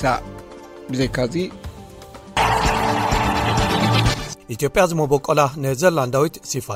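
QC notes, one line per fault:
No faults heard anywhere in this clip.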